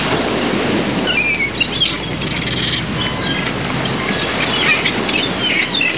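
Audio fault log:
No faults heard anywhere in this recording.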